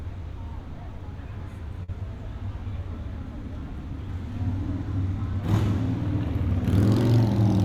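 At 1.83 to 1.90 s, a burst of packet loss. The last sound is held and fades for about 45 ms, then resumes with 40 ms skipped.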